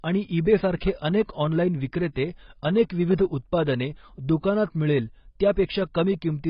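Speech runs through the whole clip with a hard ceiling. Nothing comes through above about 5.4 kHz. The voice sounds dull and boxed in. Sibilants have a fizzy, smeared texture, and sustained sounds warble. The damage is heavy and constant from start to finish. The likely cause is AAC compression, with AAC-LC squeezed to a very low rate. At that rate the encoder drops the top band and starves what remains. This fits a bitrate near 16 kbps.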